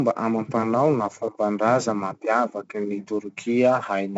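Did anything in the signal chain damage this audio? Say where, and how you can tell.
Yes, at the codec. Throughout the clip, a gritty hiss rides on every loud syllable and nothing sits above 7.8 kHz, which points to 4-bit ADPCM at around 64 kbps. Each sample is stored as a coarse step from a prediction, so the noise follows the speech level.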